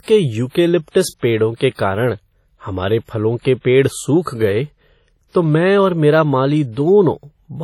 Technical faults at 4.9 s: WMA compression

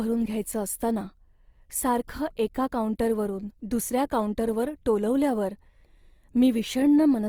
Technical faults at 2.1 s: Opus compression

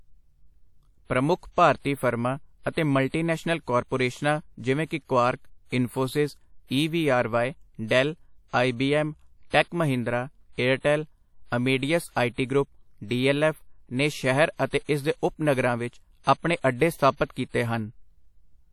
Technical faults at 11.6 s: WMA compression

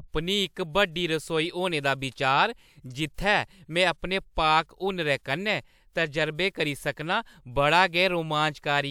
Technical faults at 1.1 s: none

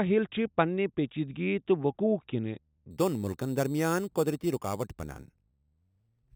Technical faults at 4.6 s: imaging from sample-and-hold upsampling

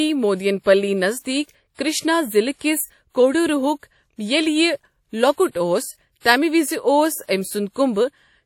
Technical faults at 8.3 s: WMA compression

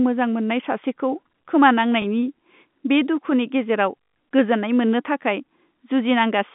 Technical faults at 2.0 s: packet loss with last packet repeated

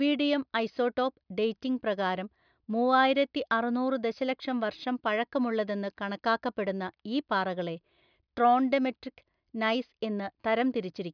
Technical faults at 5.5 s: none

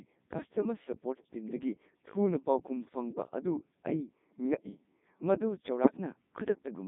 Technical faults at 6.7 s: Codec 2 vocoder

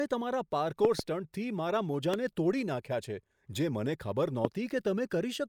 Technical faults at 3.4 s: none

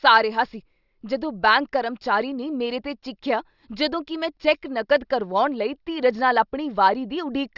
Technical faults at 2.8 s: none

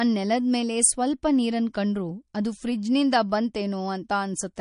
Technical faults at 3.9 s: MP3 compression

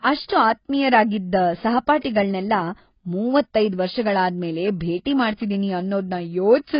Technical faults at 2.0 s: AAC compression; pre-echo

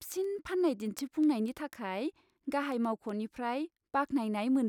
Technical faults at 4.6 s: word clock ticks

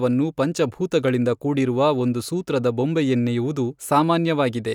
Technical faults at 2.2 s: none

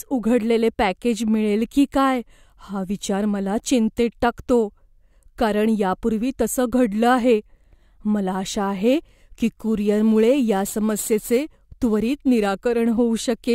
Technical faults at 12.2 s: crude rate conversion

